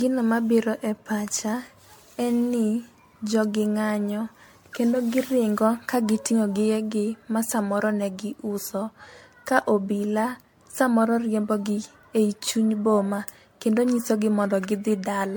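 Throughout the speech, the sound points to repeated MP3 coding at around 96 kbit/s, likely decoded and re-encoded about ten times, which is generation loss. Each pass requantises on a shifted frame grid, so coding noise and spectral gaps pile up. The result is swirly, smeared and hollow beyond what that bitrate alone would produce, with blurred attacks, even though content still reaches up to about 20.1 kHz.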